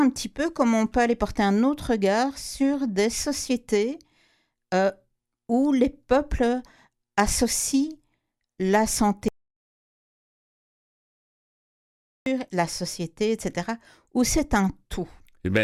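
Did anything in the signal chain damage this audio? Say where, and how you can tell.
Yes. The input path likely dropped out, through a lost connection or stray mute, while the recorder kept writing silence. This audio dropout to silence runs from 9.28 to 12.26 s. Speech cuts off, even room tone vanishes, and it resumes mid-flow at "la société", with about 3 s lost.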